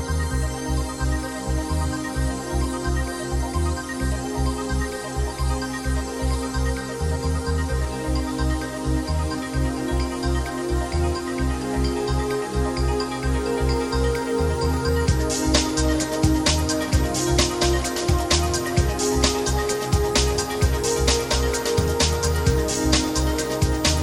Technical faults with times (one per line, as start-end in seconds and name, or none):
none